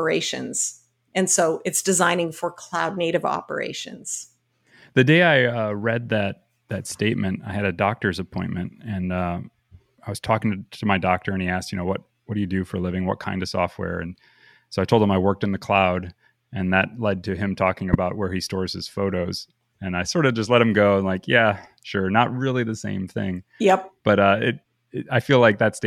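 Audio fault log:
17.93–17.95 s, corrupt frame decoded: between "led to him talking" and "where he stores his", a single damaged compressed frame was played as if valid, so misread codes and wrong gains scatter energy into frequencies the speech doesn't occupy for just under 30 ms, heard as a chirp, squeak, blip or burst of noise. On the waveform it is a brief spike peaking near -5 dBFS; on a spectrogram it is a narrow vertical smear of broadband or misplaced energy one frame wide.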